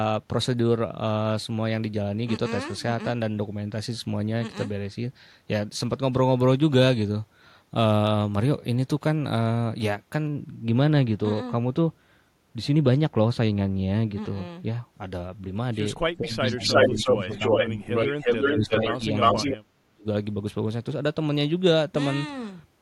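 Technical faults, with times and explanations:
10.27–14.94 s, de-emphasis applied wrongly: for these few seconds the treble slopes away smoothly, down by about 13 dB at 10 kHz relative to 1 kHz. That's a high-frequency cut meant to undo pre-emphasis landing where none existed or being applied twice, so the speech goes dull and muffled.
16.18–17.30 s, 17.62–17.91 s and 18.57–20.06 s, speech suppressed in double talk: the talker's level dips and breaks up in pieces, roughly 15 dB down in the first two spots and up to around 30 dB in the last. Likely an echo canceller that couldn't tell the near talker from loudspeaker echo while both sides spoke, so it turned everything down.
16.50–19.57 s, echo leak: a delayed copy of the speech trails about 358 ms behind, sitting roughly 5 dB louder than the speech itself. That's likely the far end's loudspeaker feeding its mic, with its echo canceller letting the leftover through and sending it back down the line.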